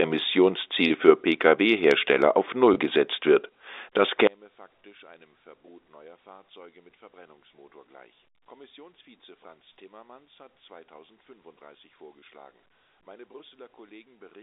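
Right at 0.88 to 0.90 s there's a tiny hiccup: packet loss with pitch repetition. About 20 ms of audio went missing, which fits a single lost packet, and the receiver covered it by looping the last pitch period of the speech. Because the gap is so short it never fades to silence. You just get a brief held, slightly buzzy tone before things carry on. The same thing happens at 2.74 to 2.76 s, again roughly 20 ms, with that same little buzzy smear.

From 4.27 s to the end, the sound collapses. The level falls by about 30 dB and what's left is faint, with the centre of the speech largely gone. That's the classic signature of one channel inverted. With one side's polarity flipped, everything the two channels share cancels when they're folded to mono, leaving only the faint difference between them. Here that likely means a reversed-polarity channel being summed somewhere downstream. It never recovers before the clip ends.

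Inside that quiet stretch, at 12.20 to 12.22 s, there's a third packet loss with pitch repetition. It's another single dropout of about 20 ms, bridged by a repeated pitch period, so there's the same brief buzzy hold, just much harder to hear at the reduced level. All of this rides over a G.711 A-law telephone path, so the band is the usual narrow 300 Hz to 3.7 kHz.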